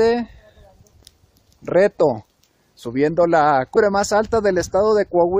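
Compressed frames skipped at 3.75 s: the audio jumps forward by roughly 150 ms, which fits about seven lost frames of around 23.2 ms each, missing from the file or rejected as damaged by the decoder.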